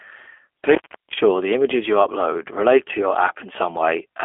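From start to finish the speech carries G.729 codec damage, plainly audible, consistent with the 8 kbit/s G.729A variant. The voice is rebuilt from a vocal tract filter and sparse pulses, so it sounds rough and slightly synthetic. A spectrogram shows a narrow band, roughly 250 Hz to 3.4 kHz, and nothing above 3.6 kHz.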